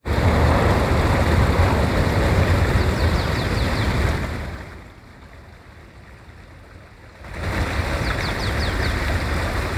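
From 7.15 to 7.52 s, zipper noise: a level change of roughly 20 dB is applied in unsmoothed 5 dB steps, about ten per second, instead of as a continuous ramp. Each jump clicks, giving an audible ticking over the sound.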